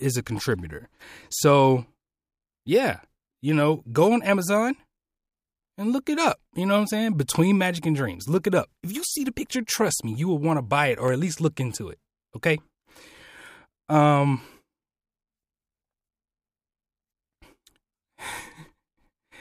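Speech recording with CD scratch ticks from 11.08 to 11.41 s, between "want to buy it" and "look into it": three clicks, each well under a millisecond, repeating once per disc revolution, where a scratch overwhelmed error correction and the player concealed the damaged samples.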